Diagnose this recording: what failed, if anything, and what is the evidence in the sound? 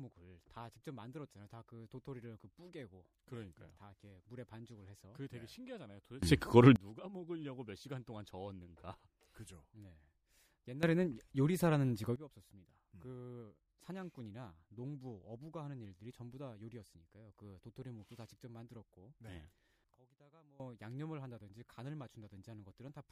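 Sudden gain jumps occur at 6.23–6.76 s (about +24 dB), 10.83–12.16 s (about +15 dB) and 19.95–20.60 s (about −21 dB). Speech and background noise step together with no ramp, unlike automatic gain control. An unsmoothed digital gain change in processing is the likely cause.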